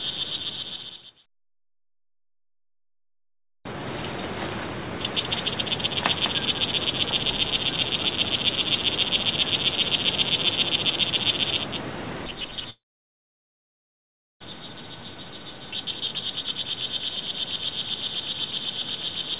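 A doubled audio track runs through the whole clip. A second, full-band copy trails the original by roughly 200 ms at about 5 dB lower, with no decay or room colour, giving a flat, stuttering slapback. It is likely caused by the sound being captured twice along a slower parallel path.

A long network dropout occurs from 12.7 to 14.44 s. With no audio arriving, the receiver stretches the last sound into a fading buzz, which soon gives way to silence or a low steady noise. When audio resumes, roughly a second of material is gone, and the timing has jumped by several tenths of a second.

A jitter buffer speed-up runs from 16.40 to 17.30 s. The buffer had built up surplus delay, so the receiver cut short pitch-period slices many times in a row, removing roughly 100 ms. The sound plays at 108% speed with its pitch unchanged and comes across as hurried. The narrow, 4 kHz-limited bandwidth of the G.711 A-law call path stays constant through all of this.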